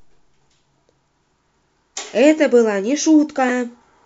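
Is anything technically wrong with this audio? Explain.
Yes, there's one problem. From about 3.48 to 3.50 s in this speech clip, a corrupt frame gets decoded. A single compressed frame had flipped bits, and the decoder played it anyway, so energy lands at the wrong frequencies for that frame. You hear it as a short, fairly loud chirpy blip.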